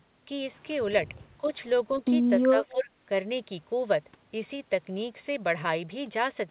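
Speech over a narrowband call line with nothing above 4 kHz, and from 2.39 to 2.91 s the talker dips by roughly 15 dB. That's speech suppressed in double talk, likely the echo canceller ducking the talker while the far end spoke.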